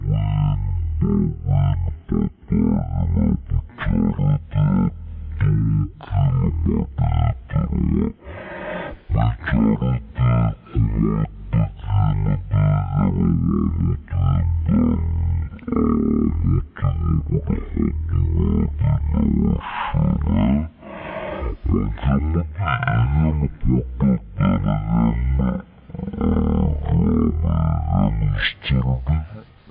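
From start to finish the audio is affected by a wrong sample rate. Everything plays at one third of its proper speed and sits about 19 semitones lower, so the sound drags and turns dark and booming. That fits material recorded at 48 kHz being played back at 16 kHz without conversion. On a spectrogram every feature is stretched threefold in time and squeezed downward in frequency. The waveform's envelopes look slow and drawn out.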